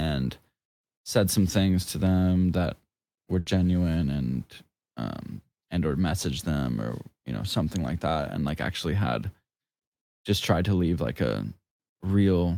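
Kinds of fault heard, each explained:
Burst of packet loss: around 3.39 to 3.56 s several packets are lost or arrive too late, so the receiver stretches the last speech sound for about 70 ms, fading it, then jumps ahead with roughly 60 ms missing; the spectrogram shows smeared, dimming bands ending in an abrupt restart.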